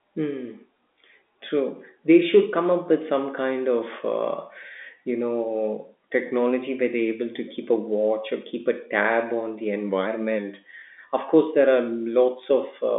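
Telephone-band speech over G.711 mu-law at 64 kbps, limited as expected to a line band of about 250 Hz to 3.6 kHz with nothing above 3.8 kHz, and no technical faults to report.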